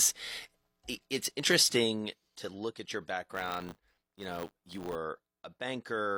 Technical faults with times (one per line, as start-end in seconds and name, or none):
1.40-1.43 overlap between stream segments
3.34-4.96 buffer tearing